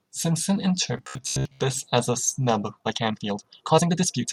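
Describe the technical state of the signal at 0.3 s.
At 0.3 s the speech signal is intact, with no audible fault at that point.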